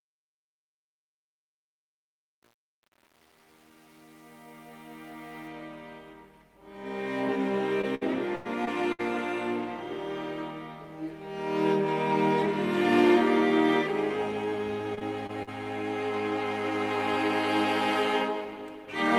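From the start to 5.48 s the clip has a fade, and across that fade, worst from 0.0 to 5.38 s, there is truncation distortion on a fade. The gain stage keeps only about 8 bits with no dither, so the low-level waveform collapses into coarse square steps. The quiet end of the fade sounds gritty and grainy.

Repeated packet loss (robotic sound) follows from 7.81 to 9.01 s. Five gaps in about 1.2 s, the longest 98 ms, add up to roughly 260 ms of missing audio. Each gap was patched by extending the preceding sound, which covers about a fifth of the stretch. The result is choppy and robotic, with a mechanical, stuttering texture and short pieces of content missing. The same fault returns from 14.95 to 15.49 s with four gaps, the longest 42 ms, about 100 ms missing in total. It is shorter and slightly milder but has the same robotic, clipped-off character.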